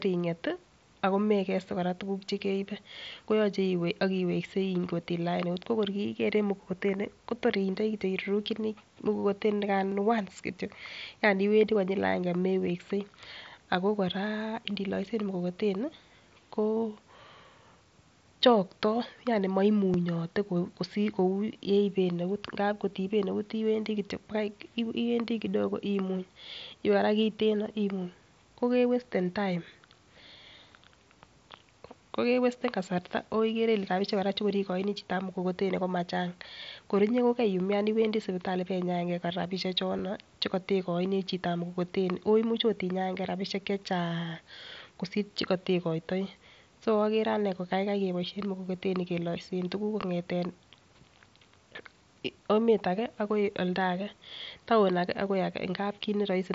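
At 9.92 s, 19.94 s, 39.99 s and 50.02 s, a brief stutter interrupts the speech. These are overlapping chunks. The audio was handled in 10-second blocks, and each new block began 25 ms before the previous one ended. That 25 ms of sound therefore plays twice at each join. It sounds like a small click and a doubled fragment. One falls just after "chokto yani" and just before "kou kosir yeiben eut", and another just before "chekotekoini chitab". The speech passes through an mSBC Bluetooth headset path, with nothing above about 7.7 kHz.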